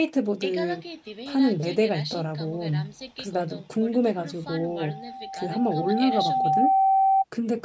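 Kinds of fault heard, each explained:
Loudspeaker feedback squeal: from 4.58 to 7.25 s, a steady 775 Hz tone swells out of the speech over about two seconds until it sits around 5 dB above it. The microphone is picking up its own loudspeaker, and at that frequency the loop gain exceeds one.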